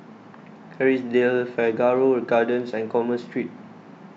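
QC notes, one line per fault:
No technical faults are audible anywhere in this speech recording.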